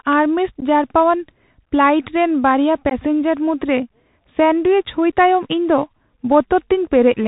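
Throughout, the speech has passed through a Bluetooth CVSD headset codec, a one-bit delta coder whose step size adapts, which fits a 64 kbps link. Nothing above 4 kHz survives, so the speech is plainly narrowband; s sounds turn scratchy, loud bright passages distort, and a granular hiss sits underneath.

At 0.60 to 0.63 s and again at 2.90 to 2.93 s, there is unconcealed Bluetooth headset packet loss: about 15 ms of audio, a couple of packets, never arrived and was replaced by silence or an idle pattern. Each gap is a brief, hard-edged hole that can click, with the speech returning quieter for a moment.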